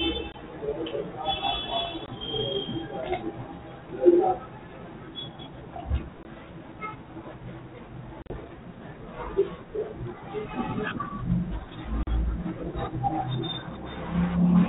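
Packet loss on an ADPCM call cuts hard-edged silent holes at 0.32–0.34, 2.06–2.08, 6.23–6.25, 8.22–8.34 (scattered, longest gap 40 ms) and 12.03–12.08 s. Each time, speech returns slightly distorted until the decoder's predictor and step size re-sync, within tens of milliseconds.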